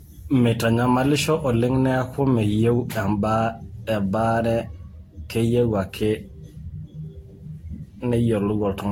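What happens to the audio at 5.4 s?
At 5.4 s the speech is smeared, swirly and hollow, with blurred attacks, as across the whole clip. This is likely generation loss: about seven rounds of lossy Vorbis coding near 60 kbit/s, each compounding noise and spectral holes.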